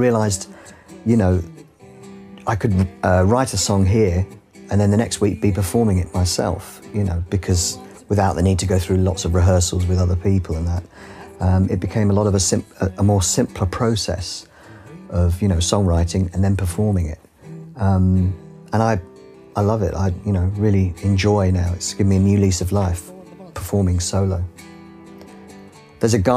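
No technical faults can be heard anywhere in the recording; the signal stays intact and continuous throughout.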